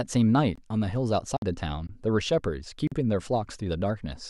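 Speech, with blocks of digital silence at 0.56–0.58 s and 1.87–1.89 s (about 21 ms each, which fits a 1024-sample buffer) and 2.87–2.92 s (about 43 ms). At 1.37 s there's a 55 ms dropout, likely a Bluetooth stall.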